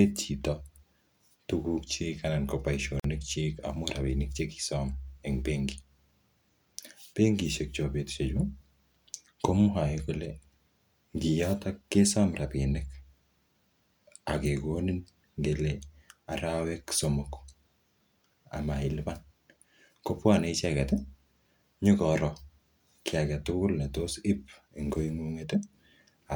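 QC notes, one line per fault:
3.00–3.04 s, gap at a join of encoded pieces: a 48 ms silence opens mid-speech, left by encoder start delay and last-frame padding kept where two separately encoded pieces meet. Unlike a dropout, nothing is lost. Speech resumes exactly where it stopped, with smeared edges.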